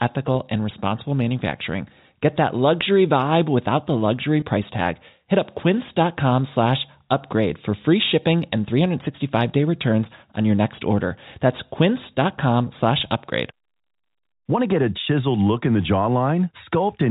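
At 4.40–4.42 s, between "vibe without the luxury" and "price tag", packet loss with pitch repetition fills a 20 ms gap (likely two 10 ms packets) with a briefly held, buzzy repeated pitch period.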